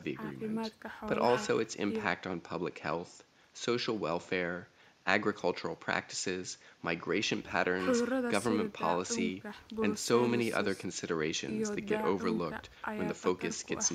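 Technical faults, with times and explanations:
Nothing stood out on listening to this speech recording; the faint room noise sits about 36 dB below the speech.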